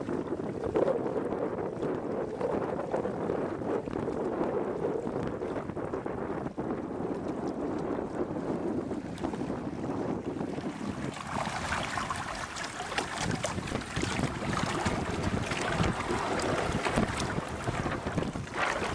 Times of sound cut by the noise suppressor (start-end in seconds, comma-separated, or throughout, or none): none